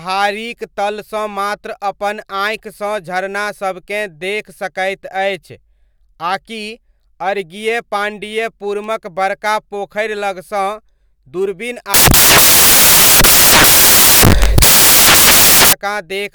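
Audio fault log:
11.94–15.73 s, samples built from the wrong bytes: the speech suddenly turns into loud, harsh broadband noise for nearly four seconds. The sample bytes are being put together wrongly, so the jittery low-order bits land in the top of each value and swamp the real signal.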